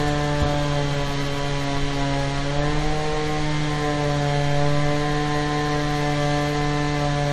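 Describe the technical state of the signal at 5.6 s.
At 5.6 s the audio is intact, with no audible fault at that moment.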